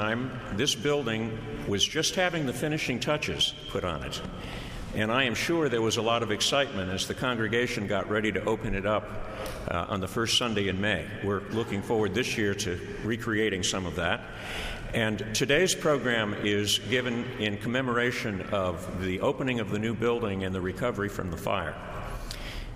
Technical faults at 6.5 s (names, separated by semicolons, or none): none